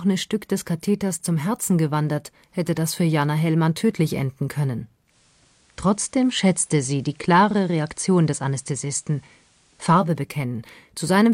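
Digital radio blending to analogue runs from 5.04 s to 10.12 s in this speech. The receiver loses its digital stream and cross-fades, over about 142 ms, to the same station's FM broadcast, then returns to digital at the end. While on FM a faint hiss sits well beneath the speech. The level stays unchanged across both blends.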